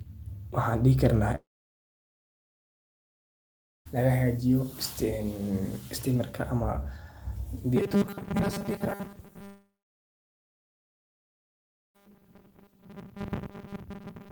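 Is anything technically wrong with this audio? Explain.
Yes. At 1.35–3.87 s and again at 9.45–11.96 s, a long network dropout, likely lost packets, removes about 2.5 s; a brief fading tail gives way to silence, appearing as a blank gap on the spectrogram and a flat waveform.

From 7.76 s to the end, the speech takes on a metallic robotic sound from repeated short buffers. Audio likely arrives too seldom, so a 5 ms chunk loops, making most of the sound a rigid 200 Hz buzz. On a spectrogram this shows as evenly spaced horizontal harmonics, and the waveform as a regular repeating pattern.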